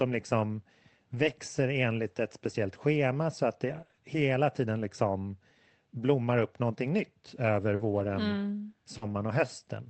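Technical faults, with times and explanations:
1.15–3.99 s, scattered short gaps: about four tiny holes, none longer than about 20 ms, each patched by extending the preceding sound. They leave isolated ticks and hiccups before "hela tiden liksom blommar", rather than one continuous smear.
7.75–7.81 s and 8.97–9.03 s, short concealed packet loss: 40 ms of audio never arrived in time at each point. The decoder continued the last sound and then crossfaded back, giving a single brief smear or wobble. At 7.75 s this follows "upp någonting nytt över".
7.79–8.09 s and 9.01–9.23 s, lost packet rebuilt from error correction: each lost packet was replaced by the low-bitrate backup copy carried in the next packet, about 160 ms and 120 ms in total. There is no gap here, only a grainier, noisier texture. This roughness is the difference from concealment, in an Opus call with 8 kHz bandwidth.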